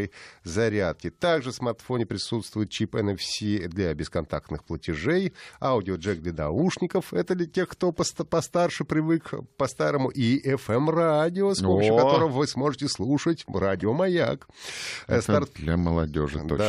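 A speech recording with no technical faults to report. Nothing heard in it points to a problem anywhere along the recording or playback chain.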